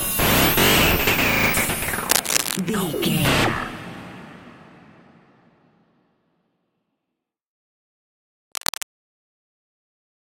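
Two bursts of cable scratch noise cut across the sound, from 2.10 to 2.60 s and from 8.52 to 8.86 s. The first is about as loud as the signal, the second a little quieter. Both are dense, uneven rustling. A worn cable or connector being moved is the likely cause.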